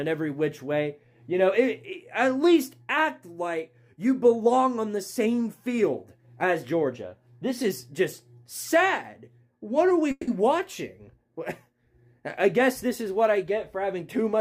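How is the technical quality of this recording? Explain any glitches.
Two glitches stand out, both in the last few seconds.

From 10.11 to 10.28 s there is a call audio freeze. The sound stops moving forward and the last moment is drawn out as a fading buzz or hiss for about 160 ms, ending in roughly 30 ms of silence. The likely cause is packets held up in transit, so the jitter buffer ran dry. When they arrive, the audio resumes where it stopped. Nothing is lost, but playback now runs 160 ms later.

From 13.43 to 14.34 s there is a jitter buffer speed-up. The receiver held more audio than it wanted. To trim the extra delay, it cut out many tiny pieces, each a pitch period or a few long. Around 70 ms disappears in total. The sound plays at about 107% speed while keeping its pitch. It comes across as slightly hurried and rushed.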